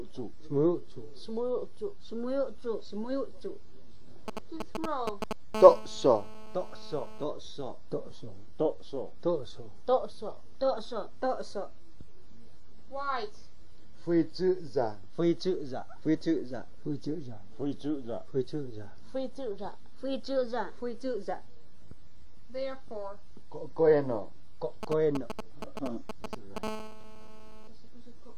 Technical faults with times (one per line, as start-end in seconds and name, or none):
4.28-5.55 GSM signalling bursts
5.55-7.24 GSM phone buzz
24.83-26.58 GSM signalling bursts
26.63-27.68 GSM phone buzz